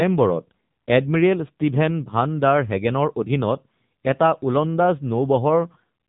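From start to finish the speech carries the AMR narrowband mobile codec sound. Nothing passes above about 3.8 kHz, and the voice turns buzzy and synthetic because the codec rebuilds it from a vocal-tract model fed by sparse pulses. The damage is plainly audible and fits a low mode near 7.4 kbps. A simple low-pass filter or an ordinary telephone band would dull the top without adding that buzzy, resynthesised edge.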